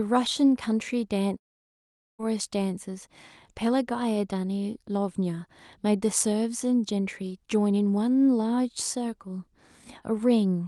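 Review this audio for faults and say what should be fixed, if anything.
From 1.37 s to 2.21 s the speech turns into a fading buzzy smear that sinks to silence, then resumes with about 0.8 s missing. This is likely a long network dropout, with the receiver's concealment stretching the last sound before giving up. Redundancy such as forward error correction, together with a steadier network link, would help prevent it. The Opus call path, band-limited near 12 kHz, is not the cause of this gap.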